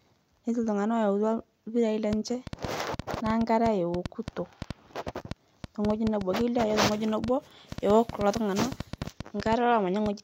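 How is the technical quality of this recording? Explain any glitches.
The recording is marred by one persistent fault. A train of clicks runs from 2.13 s to 10.07 s, about forty sharp, similar pulses at an uneven pace averaging 5.3 per second. The likely cause is electrical interference from nearby equipment or a faulty connection or power supply injecting brief spikes into the signal path. They are heard as irregular ticking laid over the speech and continuing through its pauses, peaking around 10 dB above the speech itself.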